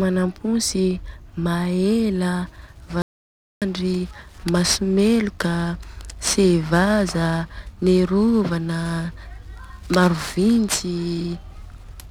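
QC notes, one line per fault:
3.02–3.62 s, audio dropout to silence: speech cuts off mid-flow for 0.6 s of dead silence with no room tone, unlike a natural pause; likely a lost input.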